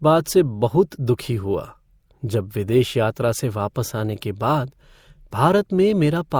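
Throughout the speech, two kinds of lossy-coding artefacts are heard together, with nothing above 20.4 kHz. This is transcoding between lossy codecs, likely an MP3 pass re-encoded to Opus, which fits about 96 then 48 kbit/s. The Opus stage spends bits re-coding the MP3 artefacts and adds its own.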